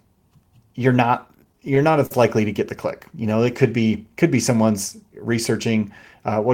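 Repeated stalls (stutter) hit this speech clip from 1.21 to 2.11 s, just before "likely to get the": twelve brief gaps, up to 45 ms, where late packets drained the jitter buffer and the last sound was stretched.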